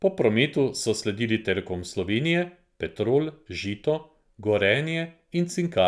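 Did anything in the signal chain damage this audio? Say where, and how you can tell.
No, nothing in the signal chain audibly damaged this speech recording, and every stage from capture through to playback sounds intact.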